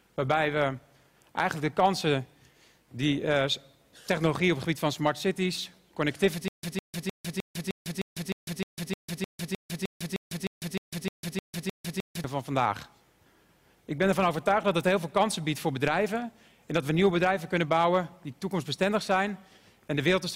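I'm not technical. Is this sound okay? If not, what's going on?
No. From 6.48 s to 12.24 s there is a stutter with silent gaps. A short piece of sound, about 0.16 s long, plays, then drops to dead silence for about 0.15 s, and the same piece comes back again and again, roughly three times a second, 19 times in all. The likely cause is that the playback or stream stalled and kept replaying its last fragment while it waited. Whatever should have played during those six seconds is missing.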